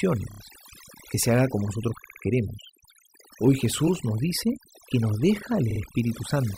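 Throughout the speech, overdone noise removal leaves the background almost silent but speckled with twinkling tones. The suppressor has cut individual bands near its noise estimate, taking quiet parts of the voice with them. Unlike low-bitrate codec smearing, the gaps between phrases are eerily empty.

Repeated frames cause a stutter at 0.31 s, where a 30 ms slice plays three extra times. At 2.04 s a 60 ms slice repeats three more times, and at 5.70 s a 50 ms slice repeats twice more. Unlike a dropout, nothing is lost; the sound is lengthened instead.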